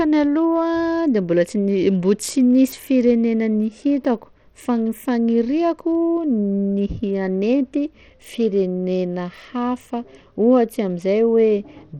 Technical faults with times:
0.00-12.00 Bluetooth SBC compression

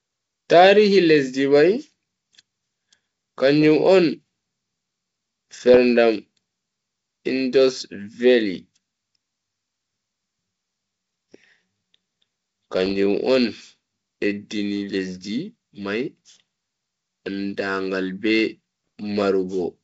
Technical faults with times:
5.74-5.77 bit errors on an ADPCM link
12.86-12.96 bit errors on an ADPCM link
18.87 bit errors on an ADPCM link

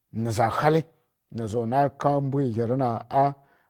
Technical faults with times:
none

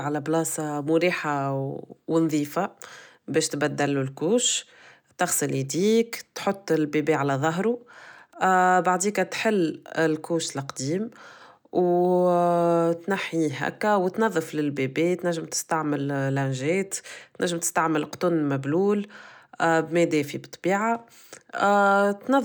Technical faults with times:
none

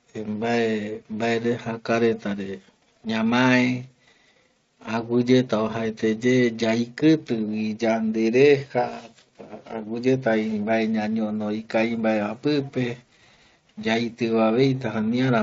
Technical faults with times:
none

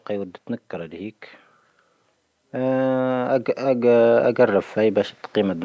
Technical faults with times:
2.51-5.60 automatic gain rising

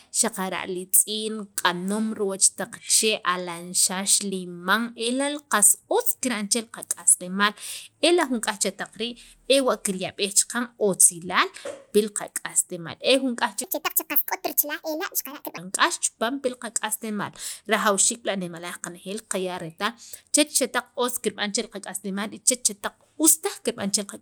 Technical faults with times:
13.64-15.58 section at the wrong speed

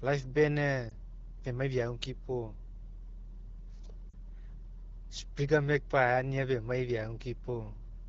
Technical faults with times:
0.90-0.93 lost AMR speech frames
4.10-4.14 lost AMR speech frames

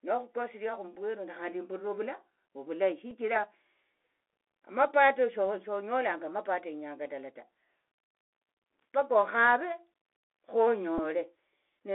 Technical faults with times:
0.00-11.95 Bluetooth CVSD headset codec
3.10 Bluetooth headset packet repeated
10.98 Bluetooth headset packet repeated

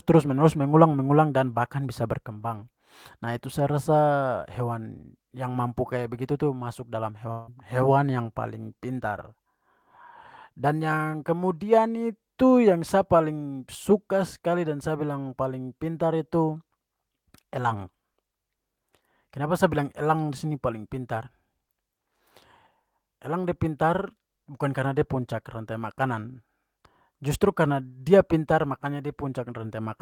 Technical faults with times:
7.31-7.49 long network dropout

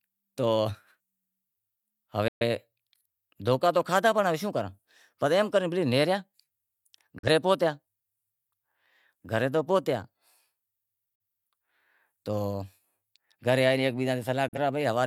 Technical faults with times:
2.28-2.45 digital broadcast dropout
7.19-7.29 digital broadcast dropout
11.15-11.20 digital broadcast dropout
14.48-14.58 digital broadcast dropout

